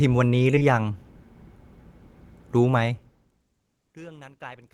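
Right around 0.55 s there's short concealed packet loss, twice in quick succession. The first stretch runs to about 0.64 s, and the second sits inside it from 0.59 to 0.63 s. Each time roughly 20 ms of speech didn't arrive, so the receiver patched the gap by extending what it had just played, about 13 ms and 21 ms of stand-in audio, the first nudging timing by a few milliseconds. You hear it as a quick smeary wobble.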